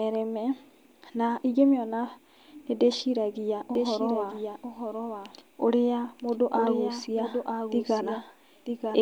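Doubled audio track from 3.75 s, after "nĩ ndĩciragia": a quieter, dry copy cuts in abruptly and lags about a second behind to the end, likely from a second capture.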